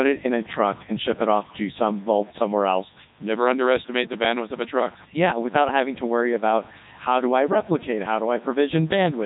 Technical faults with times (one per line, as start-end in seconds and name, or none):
0.00-9.25 low bit depth without dither
0.00-9.25 Codec 2 vocoder